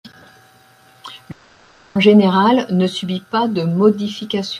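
A speech recording with one long network dropout from 1.31 to 1.97 s. For about 0.64 s no new audio is heard. The receiver stretches the last sound into a fading buzz, and that filler covers the whole gap with no pure silence. Speech resumes at "général ne subit pas", and the lost part is never replayed. The likely cause is a stall in the network stream, with packet loss concealment filling in.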